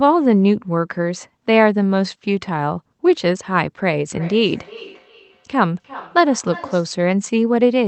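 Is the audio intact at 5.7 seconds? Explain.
No. At 5.7 s the clip is inside a stretch of feedback echo between two devices, running from 4.1 s to 7.03 s. A second device in the same room is replaying the call audio, and the first microphone picks it up again. Its echo canceller only removes its own playback, so the speech returns as a delayed, thinner copy roughly every 0.4 s, peaking at about 18 dB below the direct speech.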